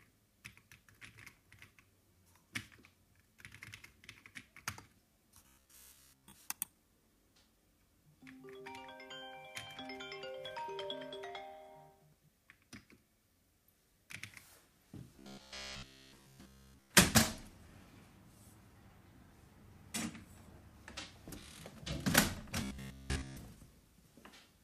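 From 5.47 to 6.33 s, again from 15.17 to 16.91 s, and once more from 22.63 to 23.37 s, the everyday sounds collapse into a robotic sound from repeated short buffers: a rigid, metallic buzz at 66.7 Hz. That pitch corresponds to a 15 ms loop, and in each stretch virtually all of the audio is this repetition. The likely cause is new data arriving too late, with the playback path recycling the last short buffer instead of the real audio.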